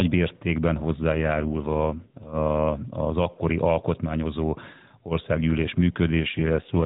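AMR rate drop at 1.12 to 2.94 s, just before "akkori alkotmányozó országgyűlés", and again from 6.18 s to the end, after those words. The narrowband mobile codec falls back to fewer bits per frame, fitting a step from 12.2 to 5.9 kbps. With the band unchanged and no gap, the speech turns buzzier and more synthetic.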